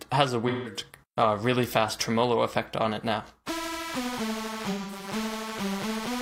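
AAC frame loss with concealment at 0.48–0.77 s and 4.70–5.07 s: the decoder patched the missing audio from the last good spectrum, giving smeared, noisy, phasey stretches.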